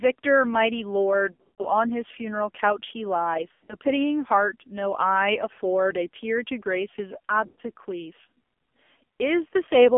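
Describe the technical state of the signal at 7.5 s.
Radio errors corrupted a run of AMR speech frames from 7.46 to 7.60 s, about 120 ms, which fits six lost 20 ms frames. The decoder keeps repeating the last good pitch and vocal tract settings at falling gain, so the speech smears into a drawn-out buzz and fades toward silence before returning weak and rough.

Underneath, the whole signal runs through the AMR narrowband mobile codec, with a heavy, buzzy, synthetic texture that points to a low rate around 5.9 kbps. The band is confined to roughly 250 Hz to 3.4 kHz, leaving the speech thin and muffled.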